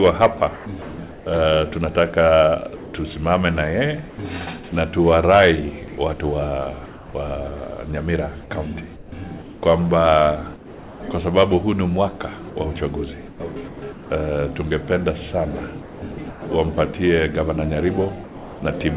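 Between 0.56 and 1.26 s the sound turns choppy. Pieces of it vanish, about 420 ms in all. This is sound chopped by the voice detector: the sender's detector most likely toggled between sending and muting several times, and the receiver patched each gap with comfort noise. The same stuttering returns over a longer stretch from 2.76 to 7.14 s, where roughly 660 ms is replaced.

From 8.96 to 11.0 s the textured background gives way to a smooth, featureless noise for about 800 ms before the real ambience comes back. That is comfort noise in place of the background. The sender likely stopped transmitting when it judged nothing worth sending, apart from sparse noise updates, and the receiver generated a rough imitation of the ambience until sound resumed.

Inside that stretch, at 9.1 s, the returning sound starts with a hard edge instead of a soft attack. About 20 ms of its beginning is missing and filler plays in its place. 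This is an onset clipped by the voice detector, which likely reacted a moment too late when sound began again.

The choppiness comes back from 12.5 to 14.1 s, with about 540 ms replaced, and again from 15.82 to 16.42 s, with about 380 ms replaced. Each time, pieces of sound alternate with the synthetic fill.

At 18.24 s the sound falls away into steady noise until 18.62 s. About 250 ms of real sound is lost inside a 380 ms patch. This is sound dropped by the voice detector: a quieter passage was likely taken for background, transmission stopped, and comfort noise filled in until the detector triggered again.

Throughout, the call path leaves nothing above 4 kHz and adds its usual coding noise, which points to 64 kbps G.711 A-law.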